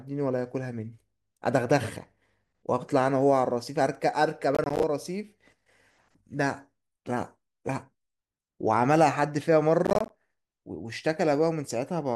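At 4.55 to 4.83 s and again at 9.85 to 10.10 s the speech breaks into processor overload crackle. For about a quarter-second each time, the processor keeps missing its buffer deadlines, and each missed block of roughly 10 ms comes out as silence with hard edges. Roughly 15 of those dropouts turn into a gritty, tearing crackle over the speech, which clears as soon as the load eases.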